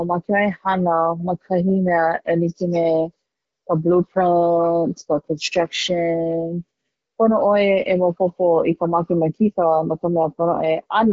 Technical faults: none

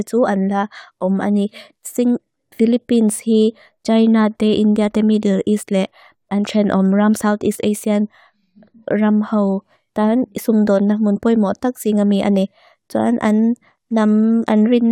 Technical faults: none

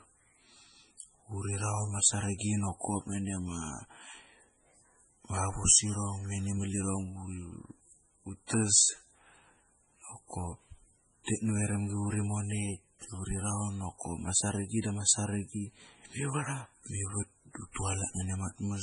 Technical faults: MP3 compression

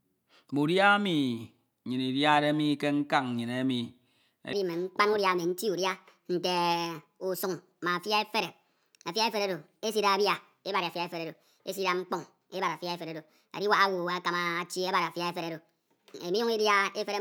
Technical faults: section at the wrong speed

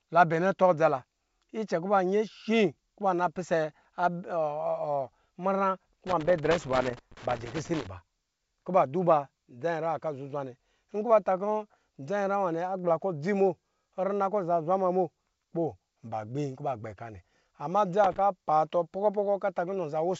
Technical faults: loose connector crackle

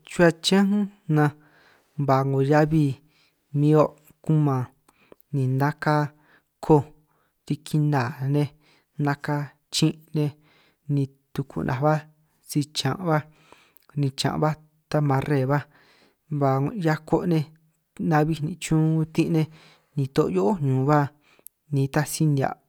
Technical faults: none

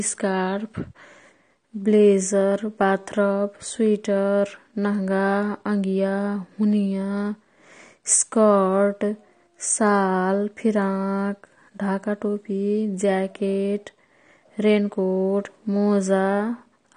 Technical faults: AAC compression

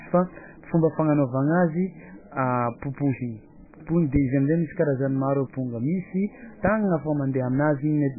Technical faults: MP3 compression

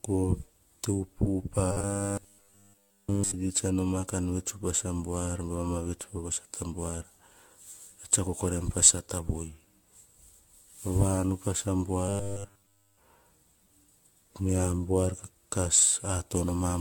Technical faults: generation loss; robotic sound from repeated short buffers

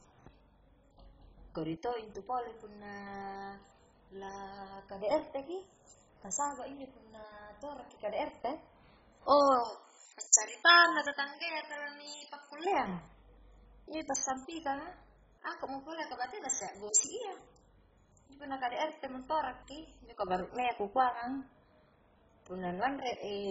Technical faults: MP2 compression; pre-emphasis left on

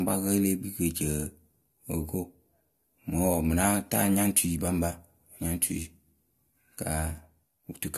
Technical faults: low-bitrate audio saved at a high bitrate

